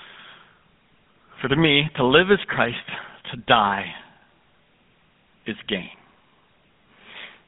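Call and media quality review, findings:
GSM full-rate codec, throughout: gravelly buzz on speech, 150 Hz–3.6 kHz band, nothing above 3.9 kHz. Sparse pulse excitation fits 13 kbps; the grit separates it from plain band-limiting.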